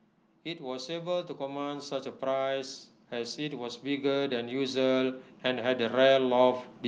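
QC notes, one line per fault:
0.47–6.67 s, automatic gain rising: the gain control judged the input too quiet and slowly wound it up, so speech and background swell together, about 14 dB.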